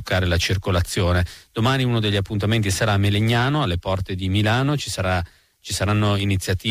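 No technical faults can be heard anywhere in the recording.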